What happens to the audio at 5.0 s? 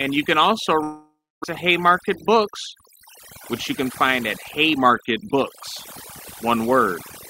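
A jitter buffer speed-up runs from 4.66 to 5.36 s: the receiver trims pitch-period slices to shed about 70 ms, so speech hurries to 109% at unchanged pitch, with whole cycles cut out of the waveform. Overdone noise removal also runs throughout, carving bands out with the noise, leaving a spectrogram of near-black gaps flecked with isolated specks.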